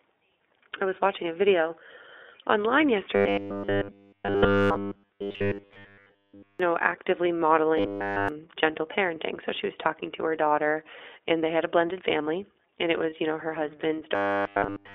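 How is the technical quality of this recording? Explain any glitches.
The recording is clearly degraded: the whole clip is narrowband iLBC-coded speech, three stretches turn into a robotic buzz, and one brief packet-loss concealment occurs near the end.

The iLBC codec is present throughout, and its damage is plainly audible. The line passes only about 300 Hz to 3.6 kHz, so sibilants and upper harmonics are gone. The speech is intelligible but rough and slightly synthetic, which fits the 15.2 kbps, 20 ms-frame mode, where each frame's excitation is coded independently. On a spectrogram, all energy stops sharply at a flat ceiling just under 4 kHz, with nothing below 300 Hz.

Robotic sound from repeated short buffers occurs at 3.16–6.60 s (ending just before "know actively"), at 7.78–8.29 s, and from 14.15 s to the end, after "you know her hmm". The likely cause is playback starving for fresh data and looping the last buffer. 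The buzz sits at 100 Hz, which points to a 10 ms buffer being repeated, and essentially none of the real audio gets through. The speech becomes a rigid, metallic drone. A spectrogram shows evenly spaced horizontal harmonics at multiples of 100 Hz, and the waveform repeats identically every 10 ms.

Lost iLBC frames occur at 13.10 s, between "blended family and it" and "you know her hmm". About 20 ms of audio is missing, consistent with a single frame. The decoder covered the gap by repeating the last pitch cycle mixed with noise, so a very short held, slightly buzzy vowel replaces the real sound. Because iLBC frames stand alone, clean speech resumes immediately. On a spectrogram, this shows as a brief smeared, periodic patch.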